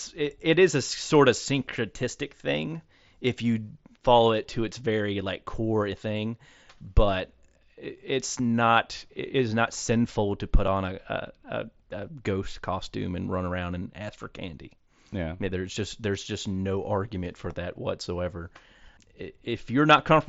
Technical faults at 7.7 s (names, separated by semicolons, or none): none